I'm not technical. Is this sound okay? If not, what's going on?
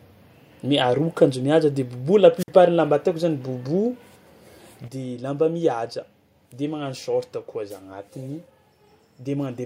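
No. At 2.38 s a wireless microphone squelch dropout occurs: hiss rises, the speech cuts to near silence for about 50 milliseconds, then returns by 2.48 s. From 4.88 s to the end there is a sudden gain jump. The speech and background noise drop noticeably quieter together, likely from a level setting applied abruptly.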